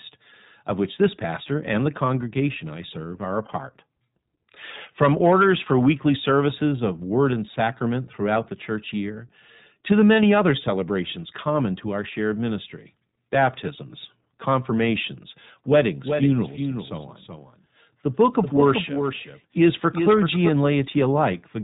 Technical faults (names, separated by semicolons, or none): iLBC codec; doubled audio track